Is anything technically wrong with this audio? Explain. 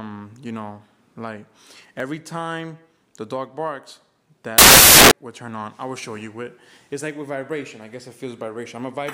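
Yes. From 4.58 to 5.11 s, samples are built from the wrong bytes: for about half a second the reader assembles each sample's bytes incorrectly, off by a byte, in swapped order, or at the wrong alignment. The rapidly changing low-order bits end up as the most significant part of every value, so the audio is replaced by loud, harsh broadband noise, close to white where the underlying sound is loud.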